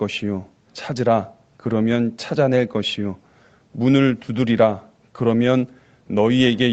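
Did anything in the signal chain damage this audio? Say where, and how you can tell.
No, the speech shows only the expected call-path signature, with the lowest bass trimmed by the microphone high-pass, nothing above 8 kHz, and a band limit that fits wideband Opus at a modest call bitrate, and no stage in the chain has added damage beyond that.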